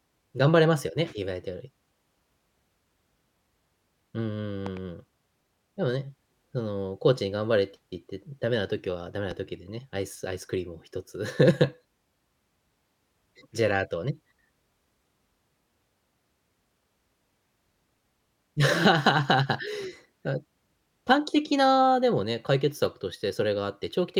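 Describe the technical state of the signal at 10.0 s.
The signal at 10.0 s is intact, with no audible fault at that point in the speech.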